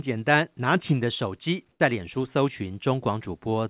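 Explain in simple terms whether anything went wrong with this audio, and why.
Between 1.72 and 1.8 s, the real background drops out for a short stretch and a smoother, quieter hiss sits in its place. That's comfort noise in place of the background, likely from the call sending nothing during a pause and the receiver filling the gap with made-up noise.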